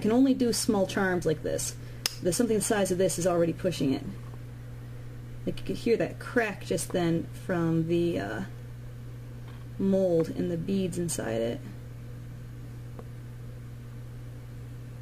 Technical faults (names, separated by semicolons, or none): none